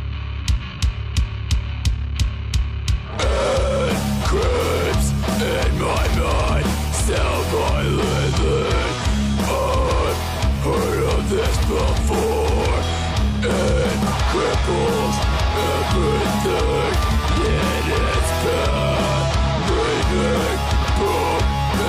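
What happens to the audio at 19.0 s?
Nothing goes wrong at 19.0 s; the audio plays through that moment intact, with no dropout, click or other audible fault.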